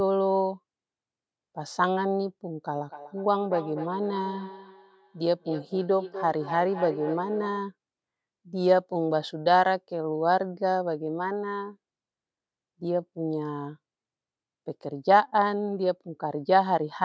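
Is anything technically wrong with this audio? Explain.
Yes. Feedback echo between two devices runs from 2.75 to 7.67 s. A second device in the room replays this microphone's signal, which the microphone picks up again. The speech returns roughly every 0.3 s, thin and ringing, peaking about 12 dB below the direct speech.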